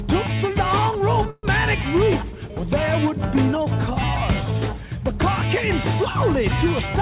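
At 1.3 s the audio stalls until 1.45 s, a call audio freeze. A fading buzz fills about 130 ms, then 30 ms of silence. Held-up packets likely emptied the jitter buffer; playback resumes without loss.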